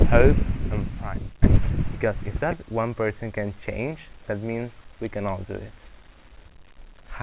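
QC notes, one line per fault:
No faults to list in these QC notes, so there is no line per fault.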